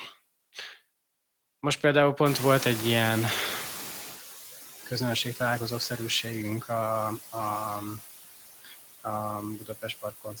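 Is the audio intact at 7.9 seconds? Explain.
No. Noise suppressor artifacts run through the whole clip, 7.9 s included. The suppressor cuts bands it takes for steady noise by about 15 dB, frame by frame, so the room noise dips between words and swells beneath them.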